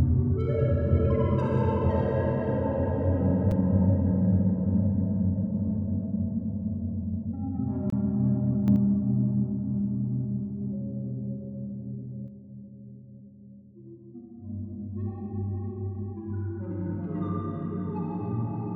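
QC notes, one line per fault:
3.51 s and 7.90–7.92 s, block of digital silence: the sound drops to silence with no fade and returns. The 5.8 ms gap is a tick and the 23 ms gap a brief hole. Their lengths fit 256- and 1024-sample buffers left unfilled. Level stays the same on either side, unlike a gain jump.
8.68–8.76 s and 12.28 s to the end, sudden gain jump: sound and background noise rise together by about 5 dB for 80 ms, and later fall about 5 dB and stay down. The likely cause is a gain setting applied instantly without a ramp. Nothing drops to silence, unlike a dropout.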